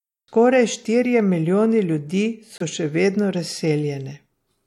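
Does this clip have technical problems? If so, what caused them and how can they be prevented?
Yes: a corrupt frame was muted from 2.58 to 2.62 s, between "štirje milijoni ljudi" and "še vedno". The decoder rejected damaged compressed data and the player substituted abrupt silence, a 40 ms hole that fits a single frame. Unlike concealment, nothing is filled in, and unlike a dropout, timing stays intact. Protecting the stream with error checking and retransmission prevents it.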